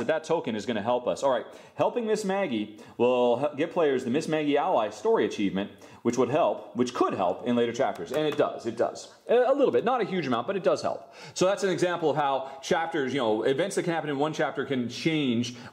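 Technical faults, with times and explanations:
No technical faults can be heard in this clip. Nothing calls for a time or an explanation at any point in the audio.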